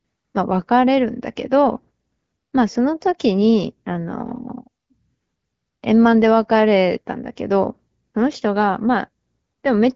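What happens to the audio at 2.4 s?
At 2.4 s the speech carries on intact, with nothing breaking into the sound at that moment.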